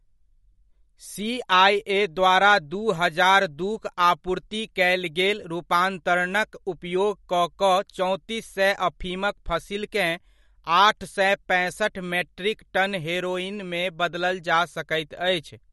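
Speech running the full length carries plainly audible MP3 compression, with a watery, swirling texture and smeared attacks. On a spectrogram there are speckled, flickering gaps across the spectrum. This is likely a low-bitrate encode, which fits roughly 48 kbps.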